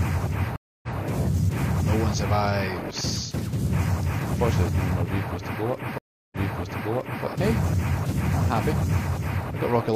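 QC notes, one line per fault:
0.56–0.97 s and 5.98–7.25 s, stream reconnect: the connection dropped, playback went silent for 267 ms and then 335 ms, and a fresh decoder restarted mid-stream from resent data, so the audio picks up again about 0.14 s and then 0.93 s earlier than where it broke, repeating that stretch. On the waveform, each event is a flat gap followed by a fade-in. On the spectrogram, it is a blank vertical band with a discontinuity in content on either side.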